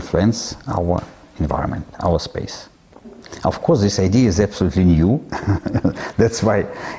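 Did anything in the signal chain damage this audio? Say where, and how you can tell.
No, nothing along the chain seems to have harmed this one, so there's no stage to point a finger at.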